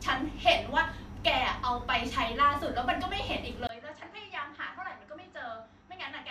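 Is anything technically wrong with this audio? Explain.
Yes. At 3.67 s the input likely switched to a poorer device. After a 20 ms gap, speech has nothing above 7.9 kHz and is roughly 10 dB quieter.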